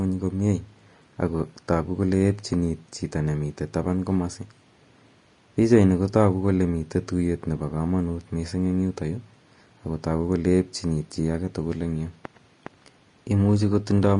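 Throughout the speech, the treble turns hissy and grainy, with roughened tones and smeared consonant onsets, likely Vorbis compression at a low bitrate around 33 kbps. Coarse quantisation replaces fine high-frequency detail with noise, and a spectrogram shows nothing above 10.6 kHz.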